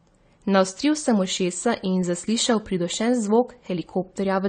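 Throughout the speech, nothing is heard above 9 kHz, and the sound is dull and smeared, with a warbling, fizzy texture on sibilants. The likely cause is AAC compression at a low bitrate, around 32 kbps, trimming the bandwidth and starving bands of bits.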